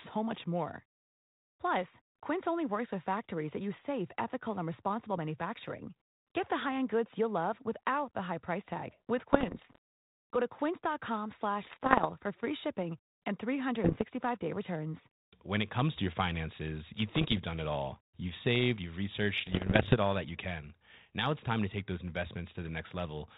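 Speech, heard through a narrowband ADPCM phone link that fits 32 kbit/s coding. Bit errors on the ADPCM link cause rough, popping bursts with sudden level jumps at 9.33–9.78 s after "high price tag with", 11.62–12.06 s, 13.84–14.03 s, 17.09–17.39 s after "finances you", and 19.36–19.96 s after "saved you've". Each flipped bit upsets the decoder's step size and prediction. So every burst rings on briefly.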